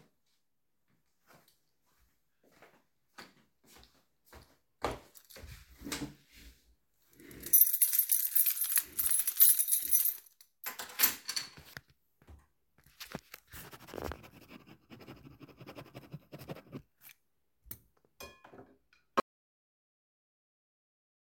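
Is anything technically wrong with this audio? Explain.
Yes. At 19.20 s the audio drops out to silence and stays silent to the end, about 2.2 s later. The cut is abrupt, and the gap is silent with no room tone or noise floor. The likely cause is a lost input, such as a disconnected device, a failed link or a stray mute, while the recorder kept writing silence. A fade-out or a noise gate would taper off; this is a sudden drop to silence.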